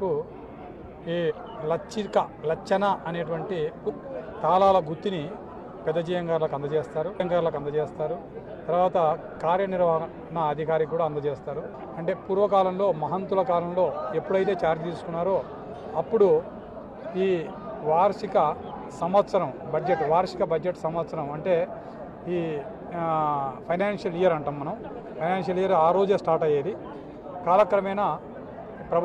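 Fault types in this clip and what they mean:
Damaged data in a compressed stream: corrupted bytes in the encoded file make the decoder misread frames, lose sync and hunt for the next valid header. Here it is heard as two brief glitches, at 1.26 to 1.32 s and 7.16 to 7.21 s.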